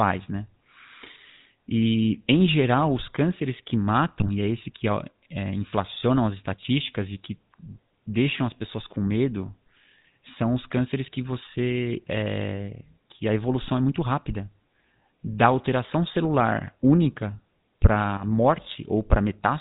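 It's a speech recording that has clearly been through the GSM full-rate codec the whole way. Nothing comes through above 4 kHz, and there's that buzzy, gravelly roughness you get when the vocal tract is rebuilt from a sparse pulse excitation. It fits the old 13 kbps full-rate coder, and the damage is plainly audible. On top of that there are two bursts of GSM bit errors, where corrupted filter, pitch or gain values reached the decoder and the voice breaks into a squawky, gargling pop. The first runs from 4.2 to 4.29 s, right after "geral os cânceres que" and before "e é esse que". The second is shorter, from 18.17 to 18.23 s.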